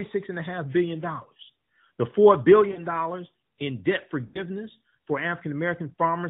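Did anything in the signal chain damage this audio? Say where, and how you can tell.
Yes. Lost AMR speech frames in the network path. The band-limited audio points to AMR narrowband coding. Gaps at 2.72–2.82 s and 4.26–4.41 s, about 40 ms and 80 ms, suggest two and four 20 ms frames. The decoder concealed them by repeating the last good pitch and spectral settings at falling gain.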